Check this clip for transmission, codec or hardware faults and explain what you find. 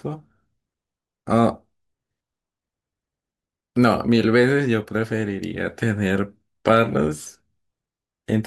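No faults detected.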